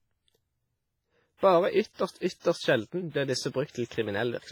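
Speech with heavy WMA compression throughout: smeary, ringing, washy hiss that breathes with the voice, likely a transform codec at a low bitrate, which fits roughly 24 kbps.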